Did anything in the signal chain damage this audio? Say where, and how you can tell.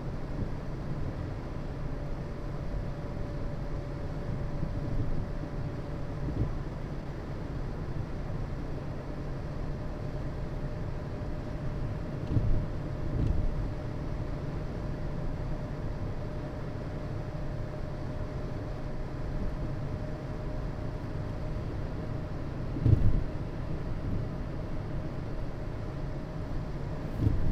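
Yes. The damage is a jitter buffer speed-up at the network receiver. From 6.66 to 8.33 s the sound runs about 4% fast, and from 12.43 to 16.37 s about 2% fast, with no change in pitch. The receiver's buffer had built up more audio than its target and drained the excess by cutting out short pitch-period-length slices in quick succession, roughly 70 ms in total for each episode.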